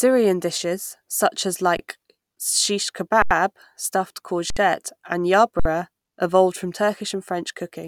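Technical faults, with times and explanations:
1.77–1.79, 3.22–3.31, 4.50–4.57 and 5.60–5.65 s, underrun with held sample: the output buffer ran dry for 21, 85, 64 and 58 ms (the first two fit 1024- and 4096-sample buffers), and the converter held its last value. The waveform shows a flat line and the spectrogram a blank vertical band. No audio is lost, so playback resumes where it stopped with only a soft edge.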